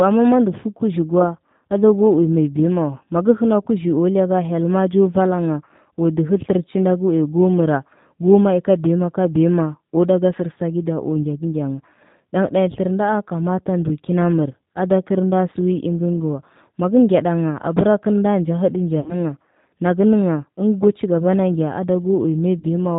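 G.729 codec, throughout: the speech is squeezed through a low-rate vocal-tract model whose texture points to G.729A at around 8 kbit/s. Each 10 ms frame is rebuilt from a filter, a pitch predictor and a handful of pulses, so nothing reaches above 4 kHz. The voice is intelligible but clearly rough and synthetic.

VoIP packet loss concealed by the speech codec, from 19.0 to 19.15 s and again from 22.59 to 22.64 s: audio went missing, 60 ms in the first gap, which fits three lost packets, and 20 ms in the second, which fits one. The decoder filled each hole by repeating its last pitch and filter at falling gain, so the sound stretches into a fading buzzy tone or coloured noise. Because each frame builds on the previous one, the speech stays weak and distorted briefly after each gap.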